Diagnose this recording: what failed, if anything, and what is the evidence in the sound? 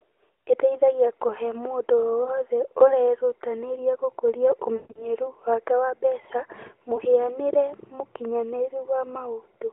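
Lost AMR speech frames at the radio link: brief dips near 2.24 s, before "ũrerutanĩria gũkũria", and near 6.96 s, after "wake wa mbeca"; and 4.76 to 5.08 s, where about 180 ms drags out and fades. The decoder repeats its last good pitch and vocal-tract settings at falling gain.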